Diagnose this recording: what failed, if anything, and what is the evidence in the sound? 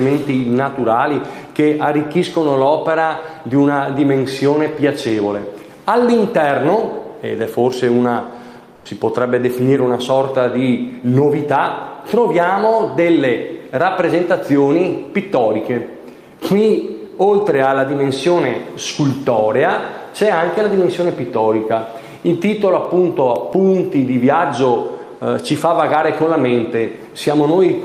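At 8.75 to 8.85 s the background turns flat and featureless, about 2 dB quieter. This is comfort noise in place of the background, likely Opus DTX in the codec.

Six tiny ticks, the longest about 1 ms, recur between 22.85 and 23.70 s. These are CD scratch ticks: on each disc revolution the player conceals data its error correction cannot rebuild.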